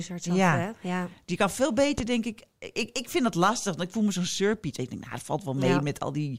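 A sudden step of voltage, likely from a plug, a switch, static or a driver glitch, entered the signal at 1.98 to 2.02 s, between "kan veel" and "denk ik". It sounds as a single loud pop, about 10 dB above the speech, which continues underneath.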